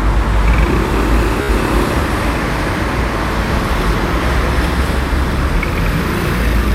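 From 1.42 to 1.49 s, a Bluetooth stutter. Lost packets make the receiver replay its last slice. A brief buzz follows, then sound jumps ahead.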